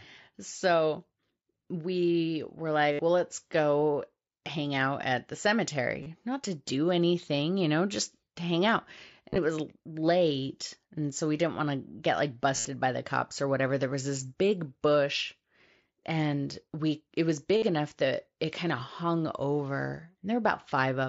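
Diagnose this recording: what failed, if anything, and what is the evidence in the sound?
Concealed Bluetooth headset packet loss on the headset-to-phone radio link at 2.92, 6.03, 9.29–9.38, 12.56–12.65 and 17.57–17.62 s. The receiver fills each 30–75 ms gap by repeating recent waveform, so a short buzzy held tone appears, warbling as speech returns.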